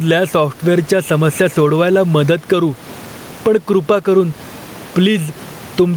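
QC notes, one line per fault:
Throughout: gain pumping. The room noise sits about 29 dB below the speech, and the gain swings by roughly 10 dB, likely from gain set too high with a fast limiter pulling it down on loud sounds.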